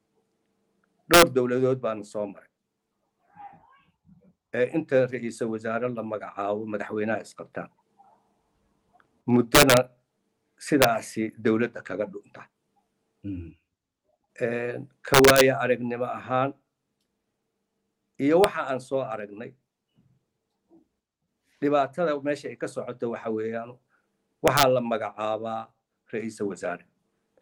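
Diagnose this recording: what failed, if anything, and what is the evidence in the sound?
Violent, snapping cracks burst out on loud peaks at 1.14–1.22 s, 9.55–9.77 s, 10.82–10.84 s, 15.14–15.41 s, at 18.44 s, and at 24.48–24.63 s, far harsher than ordinary clipping. This is integer overflow in the sample-format or gain stage. Peaks pushed roughly 1 to 6 dB past full scale were not limited. They wrapped to the opposite sign, so each overshooting sample jumps across the whole range and produces these cracks.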